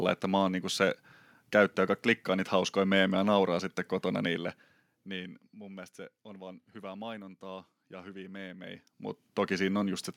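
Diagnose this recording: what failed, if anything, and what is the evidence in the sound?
Nothing in the recording points to a failed stage: the speech carries through with no dropouts, clipping or glitches audible at any point.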